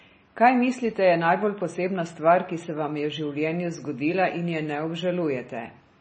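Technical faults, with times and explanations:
Throughout, MP3 compression: the encoder was likely starved of bits, with heavy damage that fits a bitrate around 24 kbps. To cope, it discarded everything above 8.3 kHz and zeroed the weaker frequency lines, which then flicker on and off from frame to frame. The speech loses its top end and takes on a watery, swirling quality, with metallic chirps on s sounds and smeared consonant onsets.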